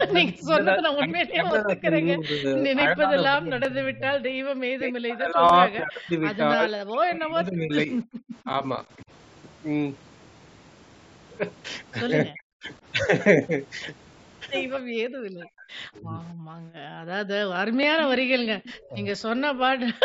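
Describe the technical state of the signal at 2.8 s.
At 2.81 s there is a single sharp click from dropped samples. Less than a millisecond of the stream is missing, likely lost between buffers, so the waveform jumps straight to a later value. It shows as a thin vertical line across the spectrogram and a step in the waveform.

The click falls inside a longer stretch of speech suppressed in double talk, from 0 to 9.1 s. The echo canceller likely confused this talker with loudspeaker echo during overlapping speech and pulled the level down, for about seven seconds in total and by up to about 35 dB. The voice dips and breaks up, and the spectrogram shows faded, gappy energy with a thinned high end.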